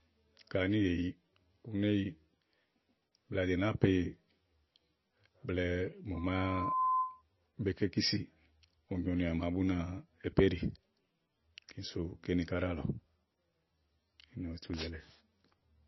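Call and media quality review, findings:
Likely MP3 compression at a starved bitrate, around 22 kbps: treble cut flat above 5.8 kHz, weak bands flickering frame to frame. Watery, swirly speech throughout, dulled sibilants.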